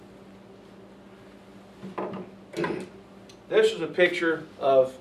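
No technical faults can be heard anywhere in this audio. Nothing in the sound calls for a timestamp or a repair.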